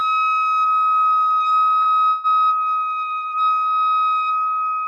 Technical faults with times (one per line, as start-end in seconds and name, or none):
1.81-1.88 short stall from a late packet
2.09-2.27 call audio freeze